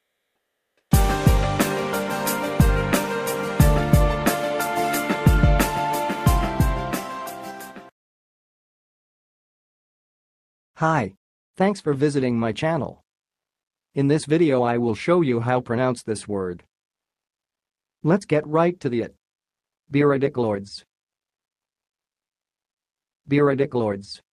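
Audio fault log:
0.00–0.91 s, comfort noise in place of the background: the opening background is a flat, featureless hiss, about 23 dB quieter than what follows and far below the loud parts. This is likely discontinuous transmission, Opus DTX, pausing sending while the receiver synthesised noise.
0.60–0.91 s, onset clipped by the voice detector: the sound starting here lacks its soft beginning, with about 310 ms missing, so it jumps in abruptly over the synthetic noise. The sender's detector likely noticed it late and never transmitted those first moments.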